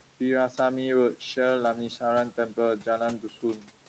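From the start to the end of the speech, noise suppressor artifacts are present. The suppressor pulls the steady room noise down by about 12 dB in each frame, so the background dips in the pauses and comes back under the speech. Unlike a gate, which switches noise fully on and off, this lowers it band by band rather than leaving hard silences.

From 3.19 to 3.67 s, speech is cut by the noise suppressor. It mistakes quiet parts of the speech for noise and turns them down by up to about 11 dB, for roughly a fifth of a second in total. The affected parts sound swallowed or faint. Unlike a dropout or packet loss, the sound never stops or jumps; it only sags in level, and the room noise, about 20 dB under the speech, sinks with it.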